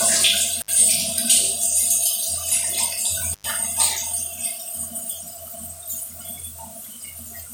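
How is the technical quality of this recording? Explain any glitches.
Two brief dropouts from an intermittent contact mar the recording. At 0.60 to 0.70 s, and again at 3.33 to 3.46 s, a loose cable or plug connection momentarily broke, opening the signal path for about 62 ms and then about 98 ms. While the line was open the audio vanished, leaving only faint hiss, and each break was framed by crackle as the contact scraped apart and then reconnected.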